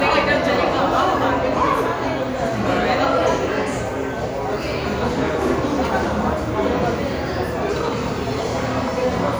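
No technical faults can be heard anywhere in this recording.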